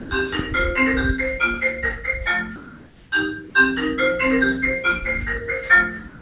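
From 0.0 to 0.1 s, the opening of the sound is missing: about 90 ms of real sound gives way to steady hiss, likely because the sender's voice detector mistook the onset for background. What sets this apart from mere noise substitution is that actual sound, not just background, is lost.

From 2.56 to 3.12 s, comfort noise replaces the background, likely from discontinuous transmission during a pause. The real background, about 26 dB below the loud parts, turns into smooth, featureless hiss about 1 dB quieter, narrowed like everything else by the call codec's 4 kHz ceiling. Nothing audible is cut off, which distinguishes it from the dropout at the start. The same swap recurs from 6.08 s to the end, where the background sits about 20 dB down.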